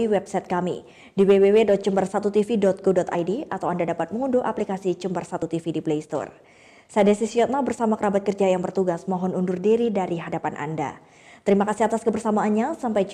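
At 3.14 s, 5.41 s and 10.27 s the audio breaks briefly, each break lasting under 20 ms. These are damaged data in a compressed stream: bytes in the encoded file were lost or overwritten, so the decoder misread the affected frames and had to regain sync at the next valid frame header. The garbled output from those frames is heard as a short glitch at each point.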